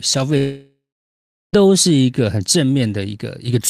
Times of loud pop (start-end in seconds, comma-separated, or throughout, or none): none